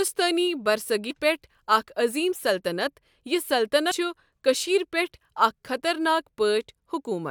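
Damaged data in a compressed stream hits twice. Corrupted frames force the decoder to misread the bytes and hunt for the next valid frame header, so the speech breaks into a brief glitch from 1.09 to 1.11 s and again at 3.90 s.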